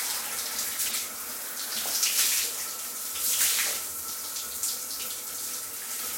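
Corrupt frame decoded, twice: damaged compressed frames were played as if valid, so misread gains and codes dropped energy into wrong frequencies. From 0.86 to 0.96 s a fairly loud noisy chirp spans what sounds like several frames. From 2.93 to 2.98 s a shorter, quieter blip follows.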